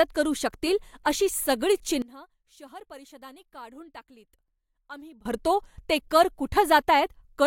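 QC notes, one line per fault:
2.02–5.25 s, one channel inverted: after "अशी सगळीच" the speech drops about 22 dB until "भरतो ते कर", likely one channel's polarity reversed, cancelling centred content in mono.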